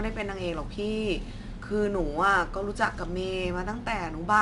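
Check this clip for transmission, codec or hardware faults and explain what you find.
One codec fault is present, and it runs through the whole speech clip: 4-bit ADPCM compression. Each sample is coded as a 4-bit step from a prediction, with the step size adapting as it goes. The coding error rides along with the signal as broadband noise, a gritty hiss that rises on louder syllables and is plainly audible. Nothing is present above 10.7 kHz, which fits a sample rate near 22 kHz and a bitrate around 89 kbps.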